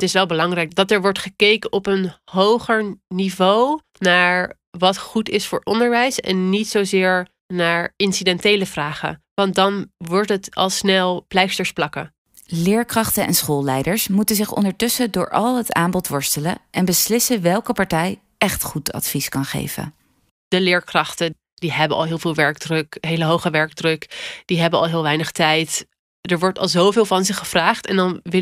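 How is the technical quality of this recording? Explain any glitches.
No glitches can be heard anywhere in this speech recording. Nothing in the audio needs explaining.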